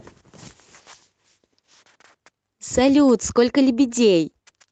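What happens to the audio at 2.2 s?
Nothing goes wrong at 2.2 s: the speech carries on intact through that moment, with no dropout, glitch or distortion.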